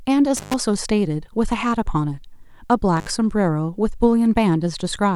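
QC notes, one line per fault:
0.37–0.54 s and 2.97–3.10 s, intermittent contact: the speech drops out twice as a loose connection briefly opens, for about 124 ms and then about 64 ms. Each dropout has crackle where the circuit breaks and remakes, and faint hiss while the line is open. On the waveform, the signal collapses to a near-flat band between spiky edges. On a spectrogram, each dropout is a blank gap in the speech energy bounded by thin broadband vertical streaks.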